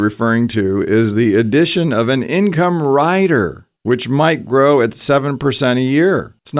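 No technical faults are audible anywhere in the speech recording.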